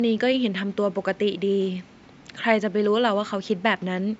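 Nothing goes wrong anywhere in this speech recording; the only thing underneath it is a bit of ordinary room noise, sitting about 33 dB below the speech.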